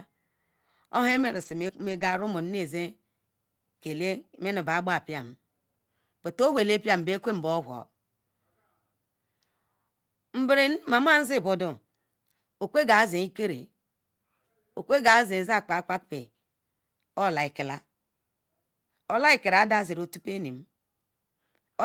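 From about 1.07 s to 2.23 s the speech turns rough and grainy in a rapid flicker. Brief 20 ms patches recur every 40 to 100 ms, with no audible gaps. This is lost packets rebuilt from error correction: 23 separate packets failed to arrive, but each following packet carried a low-bitrate copy of the missing one. The decoder played those copies, so the audio stays continuous but sounds coarser and noisier in each patch.

Inside that run, at about 1.67 s, there is a brief smear lasting a few hundredths of a second. This is a short concealed packet loss. Here 20 ms of audio never reached the decoder in time. The receiver bridged the hole by extending the preceding sound for about 14 ms, then blended back in, partly onto the rebuilt frame that begins at 1.69 s.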